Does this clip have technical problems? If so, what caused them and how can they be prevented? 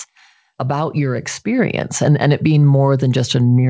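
Yes. At 1.59 s there's a microphone volume step-up: the call software judged the mic too quiet and raised the device's input gain in one jump, so speech and background both get louder by about 4 dB at once. To prevent it, disable automatic mic gain control and set the input level properly before the call.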